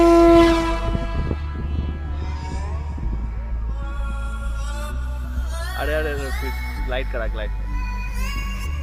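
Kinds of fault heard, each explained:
Mains buzz: From 5.29 s to the end, a steady, raspy buzz sits well below the sound, at a low level. Sharp switching spikes leak in twice per 60 Hz cycle, so harmonics of 60 Hz stack up into the kilohertz range. That gives the edge.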